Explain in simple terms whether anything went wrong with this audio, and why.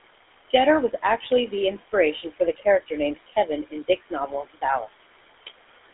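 Several things went wrong. A noise suppressor is fighting the room's background noise. It turns the noise down hard between phrases and lets it back up under the speech. These noise suppressor artifacts run through the whole clip.

The speech also went through the GSM full-rate codec, an old mobile phone coding method. It squeezes the sound and throws away everything above about 3.8 kHz. The result is muffled, with a plain buzzy, gravelly roughness all the way through.

Three times, the suppressor mistook parts of the speech for noise. This is speech cut by the noise suppressor. It happens briefly from 0.91 to 1.31 s, more heavily from 3.16 to 4.64 s, and again from 4.8 to 5.06 s. Bits of sound there seem swallowed or faint.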